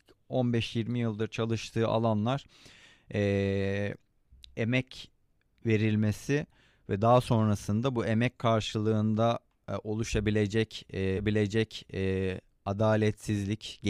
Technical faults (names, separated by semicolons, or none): stream segment repeated